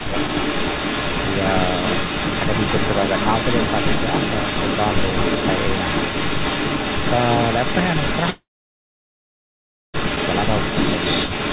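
A speech recording carried over a call, with an echo leak running the whole way through: a delayed copy of the talker trails by about 282 ms at roughly the same level as the direct speech, so it's likely a loudspeaker on the far end feeding its mic past an echo canceller that didn't catch it. Right at the start, from 0.01 to 0.14 s, there's speech suppressed in double talk, a brief dip of roughly 10 dB, likely the canceller ducking the talker while it fights that echo. Then at 8.3 s comes a long network dropout. The receiver smears the last bit of sound into a fading fill before going quiet for about 1.5 s, and the speech picks back up at 9.96 s with around 1.64 s likely lost in transit. Everything sits below 4 kHz, which fits a narrowband G.711 call path.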